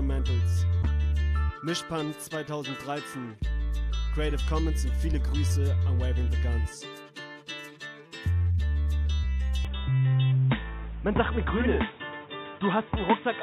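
At 9.65 s the sound turns abruptly dull and boxy and stays that way to the end, with nothing above 3.8 kHz. There is no gap at the changeover and no obvious jump in level, but a new background noise floor appears, roughly 30 dB under the signal. The sudden loss of top end with a different noise character likely comes from the input being switched to a poorer device, such as a headset's narrowband call profile.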